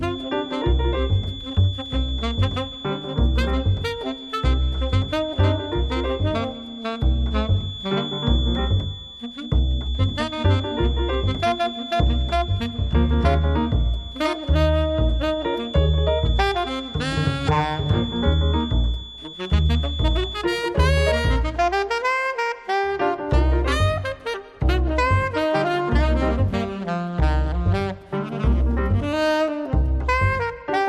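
From 0.0 to 20.5 s a feedback whistle sits well below the sound: a thin 3.4 kHz tone at one pitch, slowly swelling and fading in level, likely a speaker-to-microphone loop poised at the edge, never swelling into runaway howl.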